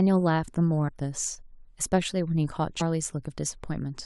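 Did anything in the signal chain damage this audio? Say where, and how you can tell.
Yes. At 0.87–0.89 s and again at 2.80 s the speech lurches ahead through a brief smeared blip, losing around 70 ms, then around 100 ms. That is compressed frames skipped at the codec: about three, then four, 23.2 ms frames dropped, overlap blurring each join.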